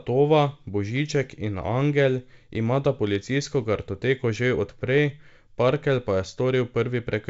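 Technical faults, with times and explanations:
No technical faults are present: the speech carries the band-limited sound of G.722 wideband telephone coding at 64 kbit/s, with content extending to about 7.7 kHz and nothing above, and any coding damage is faint at most.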